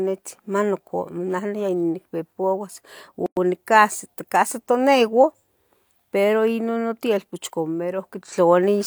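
At 3.26 s the speech drops into a sudden 108 ms silence with smeared edges, then resumes mid-flow: a gap at a join of separately encoded pieces, their padding left untrimmed.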